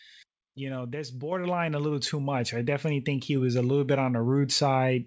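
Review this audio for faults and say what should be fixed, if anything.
Microphone volume stepped up at 1.32 s: between "you know that's" and "a little too", the speech and background both jump by about 5 dB at once, as the call software raised the device's input volume in one step. To prevent it, disable automatic microphone gain adjustment in the call software or operating system and set the input level by hand.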